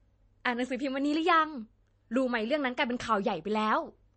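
From start to finish the speech carries plainly audible MP3 compression artefacts, likely from a low-bitrate encode; the damage fits a rate near 33 kbps. Nothing is present above about 8.3 kHz, where the encoder cut the treble to save bits. Weak frequency lines that drop in and out between frames give a watery, swirling texture, s sounds turn metallic and chirpy, and consonant attacks are smeared.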